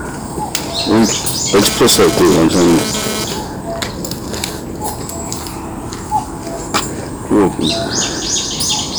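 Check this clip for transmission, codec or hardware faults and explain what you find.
Two faults are audible: hard clipping across the whole clip, and a burst of GSM phone buzz early on.

Hard clipping runs from start to finish. The audio reaches some stage about 20 dB hotter than that stage can pass, so every peak is sliced flat, with something like one sample in twenty sitting at the ceiling. Those squared-off tops generate harmonics far above the original content, giving a harsh, gritty fuzz on every loud moment. Unlike gentle analogue saturation, which rounds peaks and warms the tone, this distortion is abrupt and brittle, and it tracks the loudness of the sound itself.

GSM phone buzz appears from 1.56 to 3.24 s. A 2G handset close to the equipment is transmitting in pulses at 217 per second, and the audio circuitry rectifies those radio bursts into an audible signal. The result is a hard, raspy buzz at 217 Hz with a dense stack of harmonics, about 8 dB below the wanted audio. 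Here it stutters on and off rather than holding steady, which fits a data transfer rather than a call. Mains hum, by contrast, sits at 50 or 60 Hz, sounds smoother and persists continuously, while this buzz ignores the content and comes in clumps.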